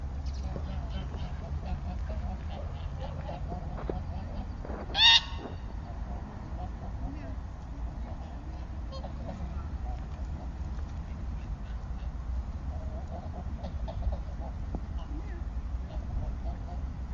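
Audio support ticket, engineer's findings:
No faults found in playback.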